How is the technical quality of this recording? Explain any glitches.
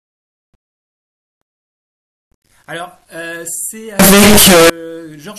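There is one serious glitch. From 3.99 to 4.70 s the speech bursts into very loud, harsh distortion, most likely from signed and unsigned samples being mixed up in 8-bit data. The flipped top bit turns every zero crossing into a full-range jump, so even quiet moments blare. That level-independent harshness sets it apart from clipping.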